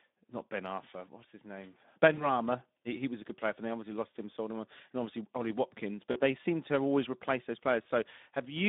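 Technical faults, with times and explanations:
Throughout: Speex codec. The sound passes through a low-rate CELP speech coder whose damage fits a setting of roughly 11 kbps, on a line limited to 200 Hz to 3.7 kHz. With so few bits for the excitation signal, the decoder rebuilds the voice only coarsely. The speech comes out noisy and hoarse with a plainly audible codec texture, and it sounds muffled because everything above 3.7 kHz is missing.
2.13–2.27 s, 6.11–6.21 s and 7.83–7.86 s: VoIP packet loss concealed by the speech codec. Packets dropped out, 40 ms of audio at each of the first two points (after "his name" and just before "they seem to have") and 20 ms at the third (after "have always replaced those"). The decoder filled each gap by extending its last pitch and filter while lowering the gain. The result is a brief, smeared buzzy tone or coloured noise that fades and leaves the voice weak or distorted for a short while after the packets return.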